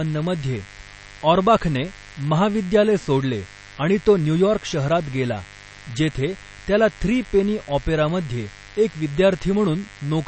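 From start to finish, a mains buzz sits under the speech at 50 Hz, around 25 dB below it. Sharp switching spikes entering twice per mains cycle stack harmonics up into the kilohertz range, so it rasps rather than droning like a smooth, pure hum.

Also throughout, plainly audible MP3 compression, likely at a low bitrate near 32 kbps, leaves nothing above 8.3 kHz. Weak frequency lines dropped from frame to frame make a watery, swirly texture, which a simple low-pass filter would not produce.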